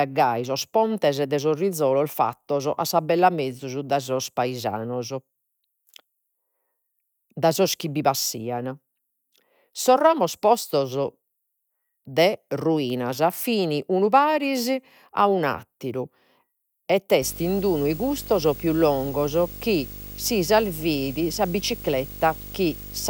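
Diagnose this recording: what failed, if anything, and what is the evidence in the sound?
Video or display buzz runs from 17.22 s to the end of the speech, in the analogue wiring stage. A buzz at 50 Hz, the picture's field rate, enters with a layer of hash above it and a whistle at 15.6 kHz, the line rate. It sits roughly 15 dB below the speech. A screen or video cable is coupling its scanning signals into the audio path, so the audio picks up both the field rate and the line rate.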